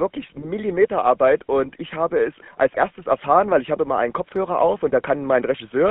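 From start to finish the speech carries the sound of the GSM full-rate codec. The band runs from about 200 Hz to 3.5 kHz, so the top end is gone. The codec rebuilds the vocal tract as a filter and drives it with sparse, evenly spaced pulses. The damage is plain to hear. The voice has a buzzy, gravelly roughness. The coarseness fits a 13 kbps full-rate stream.

The first GSM bit errors come at 0.42 to 0.45 s. Corrupted bits reach the decoder and damage one frame's filter, pitch or gain values. For that frame the spectrum bends or the level jumps. The result is a short squawk or pop. The second hit falls at 2.74 to 2.76 s, between "ich habe es als" and "erfahren weil ich habe". It is again a single frame, with a brief gargling burst. This one comes from a higher error rate, about twice that of the first.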